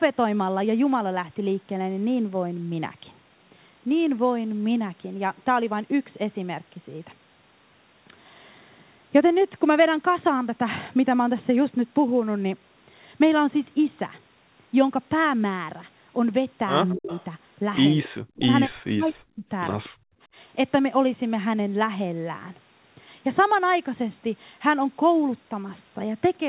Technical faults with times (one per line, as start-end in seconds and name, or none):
16.88-17.25 echo leak
16.94-17.11 speech suppressed in double talk
18.03-18.09 echo leak
18.09-19.44 speech suppressed in double talk
19.08-19.13 echo leak
19.88-20.17 speech suppressed in double talk